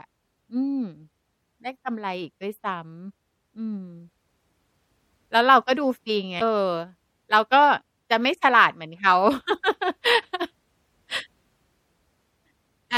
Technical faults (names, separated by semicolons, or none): MP3 compression; damaged data in a compressed stream